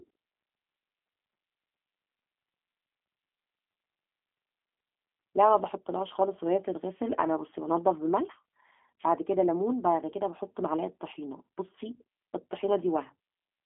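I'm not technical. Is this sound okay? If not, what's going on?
No. Throughout, the speech has gone through the G.729 codec, a phone-call compressor that rebuilds the voice and cuts everything above 3.6 kHz, so it sounds muffled, slightly rough and synthetic.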